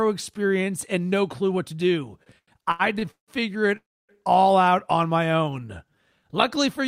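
A speech recording with three packet-delivery faults. From 2.23 to 3.31 s, packets kept arriving late, so the jitter buffer ran dry six times. The receiver stretched the last sound across each gap, producing repeated stalls (stutter): about 401 ms of filled-in audio, with the longest hold at 168 ms. That covers 37% of the span, so the speech drags and catches without losing any of it. Between 3.77 and 4.12 s, packets were likely held up in transit, emptying the buffer again and causing a call audio freeze. The last sound carries on briefly and then fades, leaving 280 ms of silence within a 321 ms filled gap. The speech then resumes where it stopped, now running 321 ms later than before. From 5.26 to 5.96 s, the buffer rebuilt its reserve by repeating single pitch periods many times over. This jitter buffer slow-down adds 86 ms and plays the speech at 89% speed with unchanged pitch, so the sounds come out drawn out.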